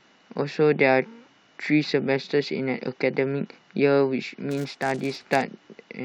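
From 4.5 to 5.43 s the speech carries a fault: a filter restarted on every block. The filter loses its memory at each block boundary and starts again from silence. Each restart leaves a small transient. Together they form a 200 Hz buzz that rises and falls with the speech level.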